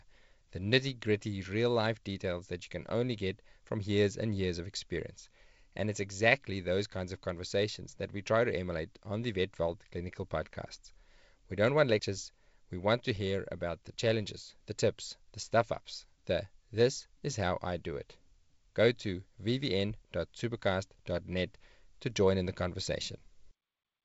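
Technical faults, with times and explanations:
No technical faults are audible in this speech; the signal has the character of G.722 wideband telephone coding, which at 56 kbit/s leaves a light hiss in the upper band and no content above about 7.7 kHz.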